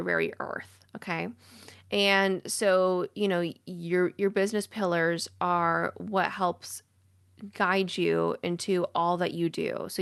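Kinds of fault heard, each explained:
No faults are audible in the signal, which carries the light coding texture of a call codec and a frequency range that stops around 12 kHz.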